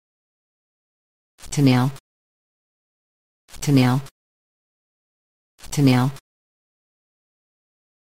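From 1.86 s to the end, the sound carries sample clock jitter: timing errors of around ten microseconds leave a roughness roughly 25 dB below the signal. Unlike steady noise, it swells on loud, bright passages and disappears in silence.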